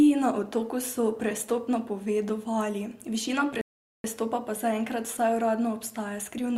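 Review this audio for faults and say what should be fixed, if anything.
A rebuffering stall occurs at 3.61 s: the player exhausted its downloaded audio and halted playback until more data arrived, restarting at 4.04 s. The speech drops into silence for about 0.43 s and then picks up exactly where it left off, so nothing is skipped, but the clip runs 428 ms longer than it should. To prevent it, keep a deeper playback buffer or lower the streaming bitrate when throughput dips.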